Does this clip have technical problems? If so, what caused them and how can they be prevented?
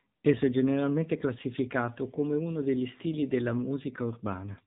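Yes. Throughout the speech, the AMR narrowband mobile codec has left plainly audible damage: the voice sounds buzzy and synthetic, and everything above 4 kHz is gone. On a spectrogram, energy stops at a hard ceiling near 4 kHz, and the harmonics look smeared in 20 ms blocks. The plainly audible artefacts fit a low AMR-NB mode of about 7.4 kbps. To prevent this, record or transmit over a wideband path, or use a higher bitrate.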